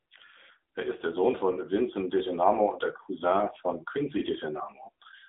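Throughout, an AMR narrowband mobile codec removes everything above 3.8 kHz, leaving the speech thin, buzzy and synthetic, which fits a rate near 7.4 kbps.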